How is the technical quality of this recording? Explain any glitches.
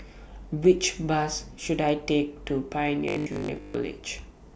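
The recording has one glitch, near the end. From 3.08 to 3.74 s, new audio likely stopped arriving in time, so the software kept repeating the same short 20 ms buffer. That robotic sound from repeated short buffers replaces most of the real speech there with a rigid, metallic 50 Hz buzz that still loosely tracks the words.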